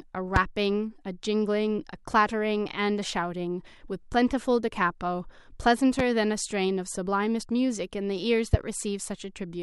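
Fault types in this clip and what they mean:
Loud pop: single sharp pops at 0.36, 5.99 and 8.54 s, each about 27 ms, stand well above the continuing speech, the first loudest; likely a stray voltage pulse. A spectrogram shows thin full-height vertical stripes; the waveform, tall isolated spikes.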